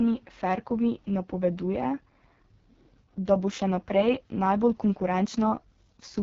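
From start to finish the speech carries the signature of the AMR wideband (HD Voice) codec at heavy damage. Nothing reaches above about 7.3 kHz, and the top band sounds hissy rather than detailed, because it is filled with shaped noise instead of coded speech. Voiced sounds turn rough and raspy as the pulse-driven vocal tract model struggles, which fits the lowest 6.6 kbit/s mode. Unlike narrowband telephone coding, the sound keeps its upper presence, and unlike MP3 smearing, it has no swirly, watery pre-echo.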